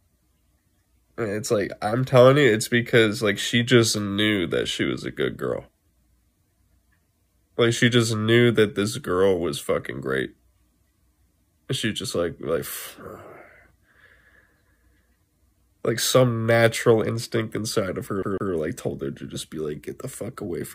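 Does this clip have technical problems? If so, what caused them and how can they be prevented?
Yes. From 18.23 to 18.53 s a 152 ms slice stutters twice with brief mutes: a CD stuck on one turn, the laser jumping back a track at a scratch. Cleaning or replacing the disc, or ripping it with error-correcting software, prevents this.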